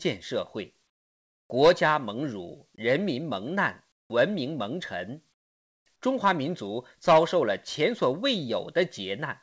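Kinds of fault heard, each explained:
Comfort noise in place of the background: In the pauses at 0.90–1.50 s, 3.92–4.10 s and 5.34–5.86 s, the faint background, already roughly 50–55 dB below the loudest speech, becomes a smoother, synthetic noise. It is about 8 dB quieter in the first two gaps and about 23 dB quieter in the third. The likely cause is discontinuous transmission: the sender stopped transmitting during silence, and the receiver filled the gap with synthetic noise shaped roughly like the background.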